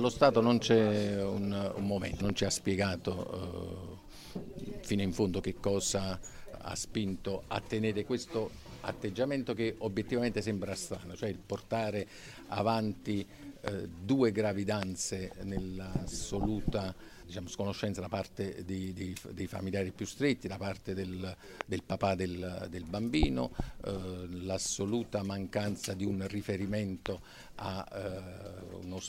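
You get a loud pop at 2.30, 13.68, 14.83, 21.61 and 27.06 s. Each is a single sharp thump sitting on top of the sound, which carries on underneath. The first is roughly 15 dB above the signal and the rest roughly 20 dB. It's likely a voltage spike from a plug, switch or static.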